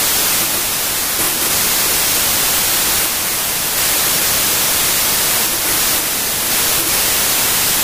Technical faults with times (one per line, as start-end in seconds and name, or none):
0.00-7.84 wrong sample width